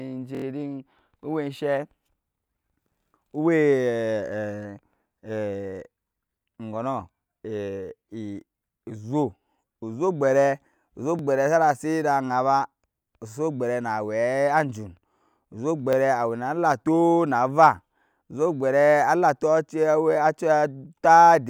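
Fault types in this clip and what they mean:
Repeated buffer: at 0.35–0.44 s, 11.19 s and 15.93 s, late audio made the device replay a 23 ms chunk, heard as hard-joined stutters.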